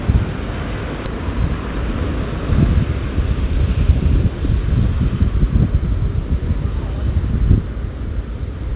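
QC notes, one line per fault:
1.06–1.08 s, skip ahead: the everyday sound jumps forward with no silence or fill at the join, and roughly 0.7 s of material is simply absent. Audio that was already queued in the jitter buffer was discarded when it overflowed, cutting the playback delay by about the same amount, so the two sides of the cut butt together almost directly. The band limit near 4 kHz around the join points to a G.711-type call codec.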